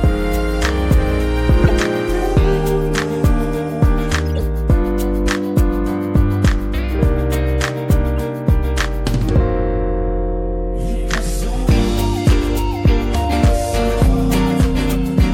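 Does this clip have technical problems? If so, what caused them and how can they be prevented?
Yes: corrupt frames decoded at 1.64–1.71 s, 4.36–4.41 s and 8.18 s give brief glitches, loudest first. Flipped bits misplaced energy in frequency. Checksums with concealment of damaged frames would prevent this.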